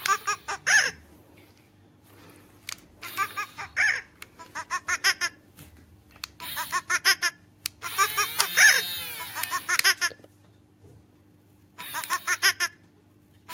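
Nothing stood out as a technical fault on listening to this recording.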